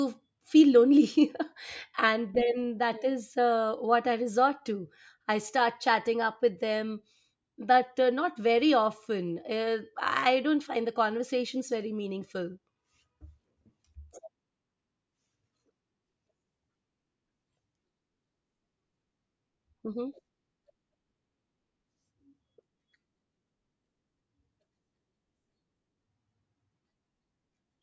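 No technical faults are audible.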